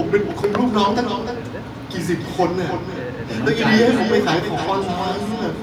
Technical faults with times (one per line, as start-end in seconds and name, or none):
0.00-5.63 echo with no canceller